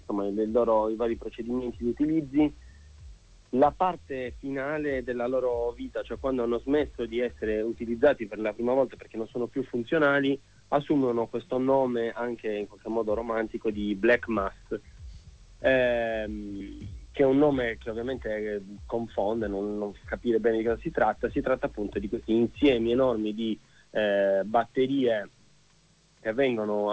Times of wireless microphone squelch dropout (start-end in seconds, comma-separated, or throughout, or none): none